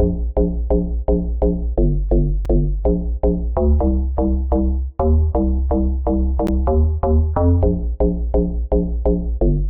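Two brief, hard-edged dropouts to silence break the sound, at 2.45 s and 6.47 s, lasting about 5 ms and 13 ms. This is a gap between stream segments: mismatched timestamps on segments about 4 s long leave holes the player fills with silence, losing no audio.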